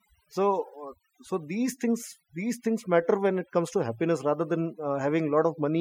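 From start to finish the speech carries overdone noise removal: an over-aggressive denoiser gates individual frequency bands near its noise estimate, so pauses collapse to twinkling near-silence. A spectrogram shows scattered isolated specks between words and ragged, hollowed harmonics.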